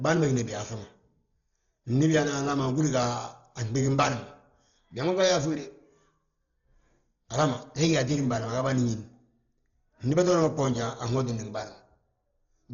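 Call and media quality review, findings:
Whole clip, speech sounds dull and muffled, nothing above about 6.9 kHz, rough fluttery noise hanging on tones. Likely Dolby Digital compression: starved encoder cutting the band, empty lines dither-filled. Damage heavy, fits roughly a 32 kbps stream.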